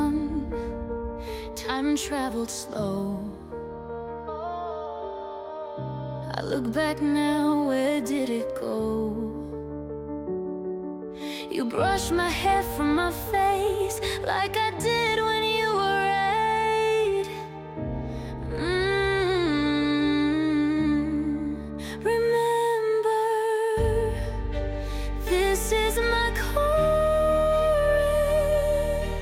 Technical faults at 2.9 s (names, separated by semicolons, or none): none